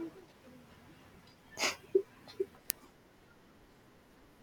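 At 2.70 s, an uninitialised buffer was sent to the output before any audio had been written into it, so whatever stale values sat in that memory were played out as if they were samples. The result is a tiny, loud crack, only about 0.73 ms long, which fits a 32-sample buffer. Against the surrounding speech it registers as a sharp click or tick rather than a sustained noise.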